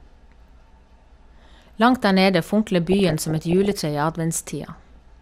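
DAB burbling hits this speech clip from 2.87 to 3.80 s and again from 4.61 to 4.97 s: at a bit error rate of around half a percent, corrupted MP2 samples put short noise blips into single sub-bands over the voice.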